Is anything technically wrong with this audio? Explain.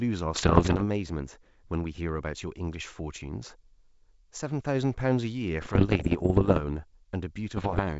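Yes. Bit errors on an ADPCM link hit the speech from 0.34 to 0.83 s, 5.62 to 6.61 s and 7.57 to 7.82 s, roughly one to two percent of bits flipped. Each flip throws off the decoder's step size and predictor, so pops and rough, briefly louder or quieter bursts ring on for milliseconds over the clear wideband G.722 sound.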